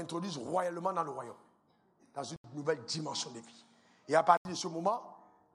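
The input was likely switched to a poorer device from 2.36 s to 4.45 s. After a silence of 80 ms, the sound loses everything above 9.4 kHz, turning duller, shifts in level by around 5 dB, and carries a faint new noise floor until it clears.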